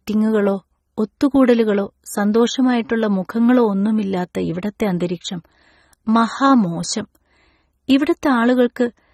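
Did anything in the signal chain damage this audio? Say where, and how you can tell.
Yes, at the codec stage, for the whole clip. The speech sounds dull and smeared, with a fizzy, warbling edge on sibilants and nothing above 15.5 kHz. This is likely AAC compression, fitting AAC-LC at about 24 kbps, which quantises coarsely and drops high bands.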